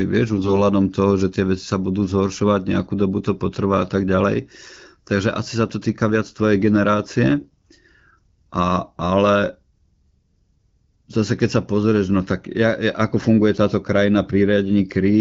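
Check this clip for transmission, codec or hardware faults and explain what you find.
Two short bursts of AMR bit errors affect the wideband AMR-WB speech. AMR bit errors occur at 0.36–0.54 s, just before "toho že tie veci", and at 7.40–7.65 s. Flipped low-priority bits misplace excitation pulses and skew pitch, gain and spectral values, so the sound turns briefly hoarse, scratchy and gargly. The second burst is rougher, pointing to a higher error rate.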